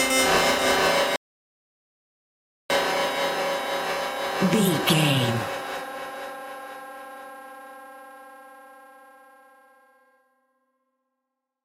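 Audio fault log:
1.16–2.70 s, playback stall. The sound stops abruptly mid-flow and the output stays silent for about 1.54 s before sound returns. The likely cause is the player running out of data or its thread being blocked, leaving nothing to send until it recovered.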